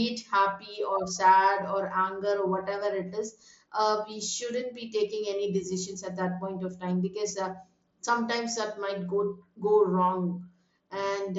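Speech over a Bluetooth mSBC link; no faults present.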